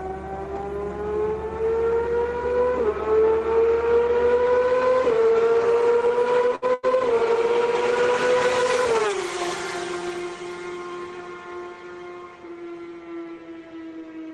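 At 6.55 to 6.65 s a burst of packet loss strikes. The receiver extends the last sound for about 65 ms, fading it into a held buzz or hiss, and then about 60 ms of audio is skipped. On a spectrogram the harmonics flatten into smeared horizontal bands that dim before the signal jumps ahead.

A second burst of packet loss follows at 6.74 to 6.86 s. Here roughly 90 ms of concealment stretches and fades the preceding sound, and about 100 ms of the original is missing when playback resumes. The waveform shows a repetitive, shrinking envelope with no transient, then an abrupt change in shape.

From 6.83 to 6.85 s, inside that second span, one 20 ms lost packet is rebuilt from error correction. Opus decoded a coarse low-bitrate copy carried in the next packet instead of leaving a hole, so this frame sounds grainier and noisier. It appears as a brief, blurrier, noisier slice on the spectrogram. 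The call path runs Opus at 32 kbps with content up to 12 kHz, so the spectrum stops there throughout.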